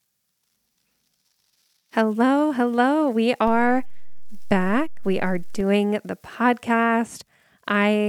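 A DC step hits this speech clip at 3.47 s and reverses at 5.61 s. The waveform's zero line abruptly shifts by about -25 dBFS, as happens when a converter recalibrates or an offset-carrying input is switched into the path. The offset holds for just over two seconds and then drops back. Each transition is heard as a low thump or click, while the speech continues unaltered through it.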